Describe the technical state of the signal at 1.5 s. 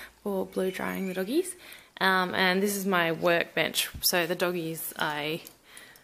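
At 1.5 s the signal is intact, with no audible fault at that moment.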